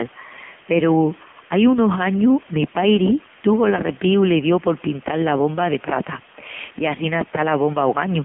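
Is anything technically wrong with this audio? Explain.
Yes. An AMR narrowband mobile codec affects the whole clip. The speech passes through a narrowband path, roughly 150 Hz to 3.4 kHz, with nothing above 3.5 kHz. The codec rebuilds the voice from a vocal-tract model excited by a few pulses per short subframe. The heavy damage points to a low mode, around 6.7 kbps. The result is a muffled, telephone-like voice with a buzzy, synthetic edge, missing both its bottom and its upper brightness.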